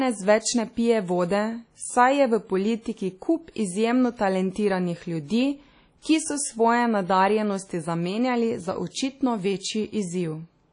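WMA compression, most likely, runs throughout the speech: nothing remains above 10.1 kHz, and the codec damage is plainly audible. Quantisation noise spreads across long transform blocks and weak spectral lines are zeroed, giving a ringing, washy sound with hiss that breathes with the signal, consistent with a low bitrate near 32 kbps.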